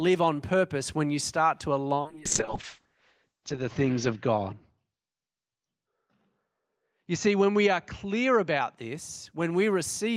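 Right after "when you start to", at 1.99 s, there's a call bitrate drop lasting until 8.83 s. The encoder got starved, fitting a slide from 32 kbps to 6 kbps. Everything above 8 kHz disappears and the speech goes rough and watery, worst for about 1.4 s.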